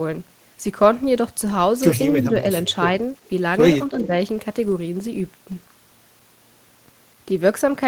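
Speech from a call, with two short level dips and two delayed copies of the voice. Between 2.16 and 2.43 s, and again between 3.91 and 4.11 s, the voice sags by about 5 dB in patches totalling around 150 ms and 70 ms respectively. This pattern is speech suppressed in double talk, likely caused by an echo canceller that could not tell the near talker from loudspeaker echo while both sides spoke and so attenuated everything. An echo leak appears at 3.25 to 3.29 s as a delayed copy arriving 318 ms behind the original and about 35 dB below the speech. It appears again at 3.98 to 4.07 s, delayed 332 ms and much stronger at about 15 dB below the speech, overlapping the second dip. These copies are likely loudspeaker pickup on one end that its echo canceller failed to remove fully and sent back down the line.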